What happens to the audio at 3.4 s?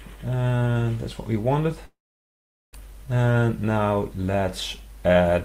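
Around there you get a jitter buffer speed-up, from about 3.35 to 3.65 s. The receiver had built up too much audio, so it trimmed short pitch-period chunks, roughly 40 ms in total. The sound runs about 11% fast at the same pitch, so it feels briefly rushed.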